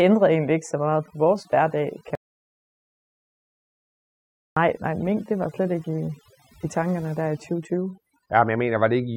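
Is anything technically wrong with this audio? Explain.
Yes. Overdone noise removal runs through the whole clip. Noise reduction was set too hard, so frequency bands close to the noise floor are pulled far down. The background drops and breaks up into twinkling specks.

From 2.15 to 4.56 s there is an audio dropout to silence. For about 2.4 seconds the sound cuts out completely, with no room tone. The input was likely lost, and silence was written in its place. Whatever was said then is gone.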